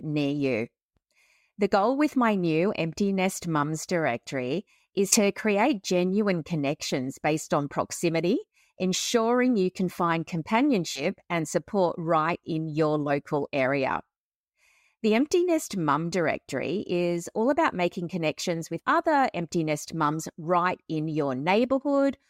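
Compressed frames are skipped at 5.11 to 5.17 s after "directory is", at 10.95 to 11.02 s before "and support right in", and at 18.79 s before "other empty nest mums". Each time the speech jumps ahead by about three 20 ms frames.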